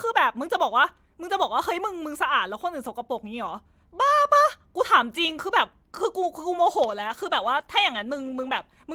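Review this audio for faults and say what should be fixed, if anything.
The call's bandwidth estimate fell at 6.6 s, and the encoder was pushed down to a much lower bitrate, a call bitrate drop that runs to the end of the clip. The change in the speech fits a fall from about 32 kbps to about 16 kbps, with the lowest rate held for about 1.7 s. At that rate Opus codes the speech more coarsely and trims the high frequencies, so the speech turns rougher and more muffled. Smoothing the bandwidth estimator's reaction to brief congestion, and setting a higher minimum bitrate for speech, would prevent this drop.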